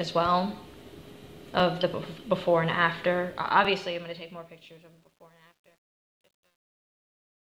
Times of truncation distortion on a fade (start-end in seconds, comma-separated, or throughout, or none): 3.17-7.43